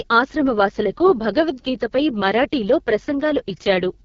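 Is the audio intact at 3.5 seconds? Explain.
No. At 3.5 seconds, as everywhere else in the clip, the speech is going through the AMR wideband (HD Voice) codec at its harshest setting. The rough, raspy grain points to the bottom mode, around 6.6 kbit/s. At that rate the pulse-driven vocal tract model can't track the voice cleanly up to 6.4 kHz, and the band above that is just shaped noise. Nothing comes through above about 7.2 kHz, so it sounds dull and gritty.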